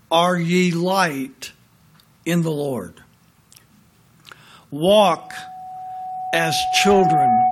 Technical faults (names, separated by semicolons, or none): loudspeaker feedback squeal